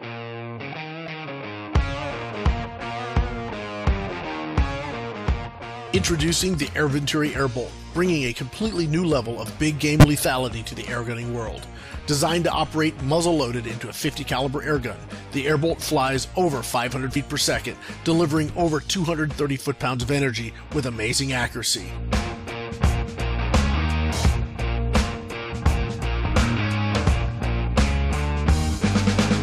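Listen around 1.06 s and again at 17.08 to 17.17 s and you'll catch compressed frames skipped: the audio jumps forward by roughly 20 ms the first time and about 50 ms the second. Then at 10.00 to 10.04 s there's a corrupt frame decoded, a glitch peaking at about -5 dBFS across a couple of frames, where damaged data got played anyway and scattered energy into the wrong frequencies.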